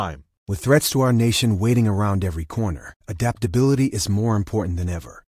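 No technical faults can be heard anywhere in this speech recording. Nothing interrupts, distorts or drops out of the audio at any point.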